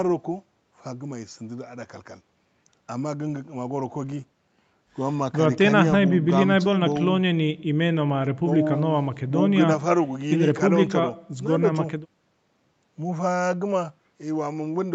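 No technical faults are audible in this speech.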